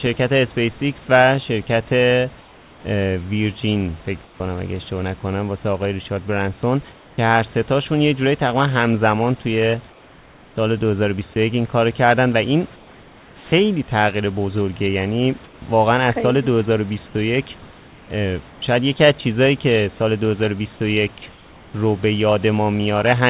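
Between 2.4 and 4.4 s, the room noise in the pauses turns flat and featureless for about 600 ms, the same at 6.92–7.18 s and 21.32–21.74 s, where it drops about 3 dB. Spread over 9.9 to 18.62 s, about 2.26 s is like that. This is comfort noise in place of the background, most likely from discontinuous transmission: the sender's detector heard no speech and stopped sending, and the receiver synthesised a smooth stand-in for the room noise, which sits about 27 dB below the speech on this 4 kHz-limited call line.

At 11.34 s, about 10 ms of sound vanishes into that same steady hiss for a moment. This is sound dropped by the voice detector: it likely mistook a quiet sound for background, cut transmission, and comfort noise filled the gap until it triggered again.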